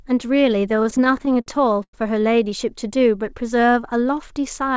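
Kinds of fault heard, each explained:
Repeated stalls (stutter): between 0.70 and 1.95 s, late-arriving packets make the speech repeatedly stretch and drag, with waits up to 100 ms. Unlike dropouts, nothing goes missing.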